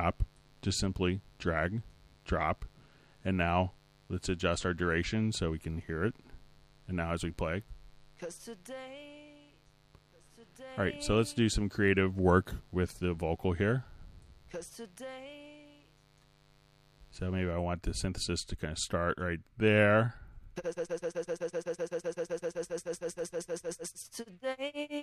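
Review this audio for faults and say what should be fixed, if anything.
Mains buzz runs from 0.00 to 17.52 s, a raspy 50 Hz harmonic buzz some 35 dB below the sound, from switching spikes leaking in. Shield cables and keep dimmers and rectifiers off the audio power.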